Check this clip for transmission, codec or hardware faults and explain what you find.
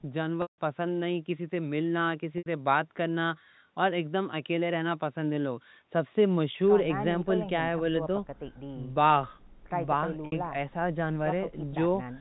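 Yes. There is one fault type: packet loss with pitch repetition. It occurs four times, at 0.42–0.58 s, 2.38–2.46 s, 6.52–6.54 s and 10.26–10.32 s. The gaps are 160, 80, 20 and 60 ms, which fits 20 ms packets. Each time, the receiver repeats the last pitch period to fill the hole. It fades that out over about 50 ms. The 20 ms gap sounds like a briefly held, buzzy note. The 160 ms gap fades to silence, and the speech returns with a short cross-fade. The telephone-band G.711 coding is audible alongside this.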